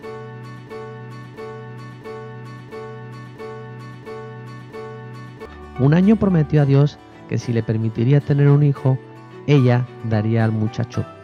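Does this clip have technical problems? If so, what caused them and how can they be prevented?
Yes: a broken-record loop runs from 0.67 to 5.45 s, with one 0.67 s fragment repeating seven times, likely from a stalled player or stream resending its last buffer. To prevent it, have the playback or streaming chain output silence on a stall rather than replaying stale data.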